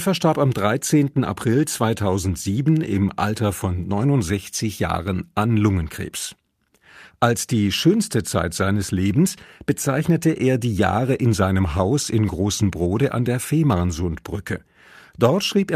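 No technical faults can be heard anywhere in this speech recording. Nothing in the sound breaks, jumps or drops out at any point.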